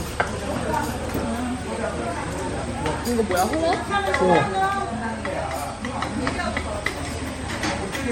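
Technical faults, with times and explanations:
Throughout, generation loss. The sound is swirly, smeared and hollow, and attacks blur. Nothing is heard above 16.5 kHz. This points to MP3 near 60 kbit/s, likely re-encoded about five times, each pass adding fresh quantisation noise on a shifted frame grid.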